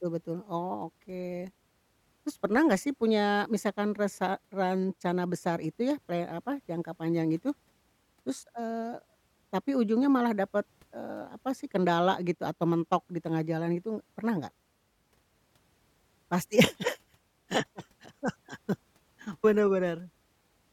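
No technical faults can be heard anywhere in this recording.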